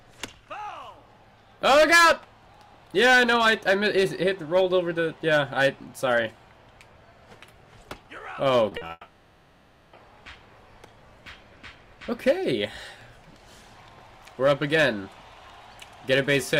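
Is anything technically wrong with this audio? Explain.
Yes. Three short concealed packet losses, at 8.69, 8.77 and 8.87 s (about 20, 40 and 20 ms), are brief gaps bridged by extending the preceding sound, heard as quick smears that leave no silent hole.

From 8.91 to 9.95 s, likely a long network dropout: for about a second the last sound carries on as a fading buzz or hiss, ending in a brief silence before the audio resumes with that stretch missing.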